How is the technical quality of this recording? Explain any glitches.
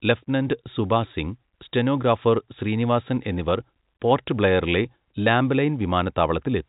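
The technical quality holds up with no glitches to explain, within the narrow G.711 telephone band that stops at about 3.8 kHz.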